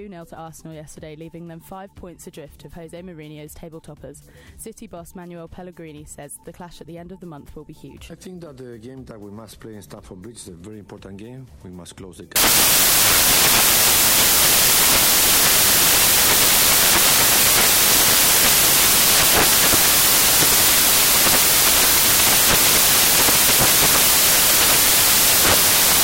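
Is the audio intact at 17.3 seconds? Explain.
No. At 17.3 seconds the sound is buried under samples built from the wrong bytes, a fault running from 12.36 s to the end of the clip. The reader assembles each sample's bytes incorrectly, whether offset by one byte, swapped in order or misaligned, so the rapidly fluctuating low-order bits end up as the most significant part of every value. The result is loud, harsh broadband noise, close to white on loud sounds.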